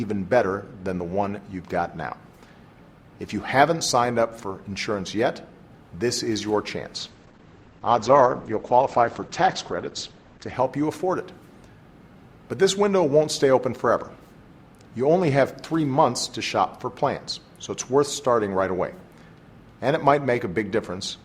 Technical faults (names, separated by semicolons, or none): call bitrate drop